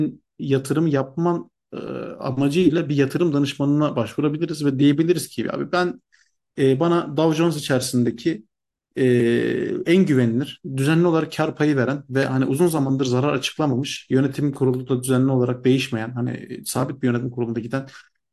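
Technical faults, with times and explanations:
No technical faults can be heard in this speech recording, and the signal carries through its full duration with no disruption to level, timing or continuity.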